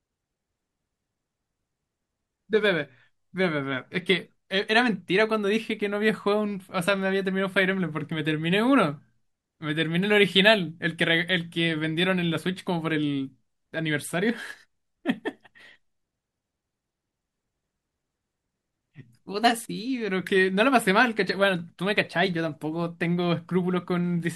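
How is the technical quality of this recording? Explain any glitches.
No glitches or technical faults are audible anywhere in the speech, so there is nothing to explain.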